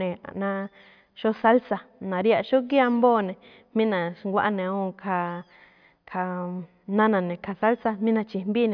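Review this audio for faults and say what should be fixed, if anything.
No faults turn up in this audio, so nothing needs to be fixed.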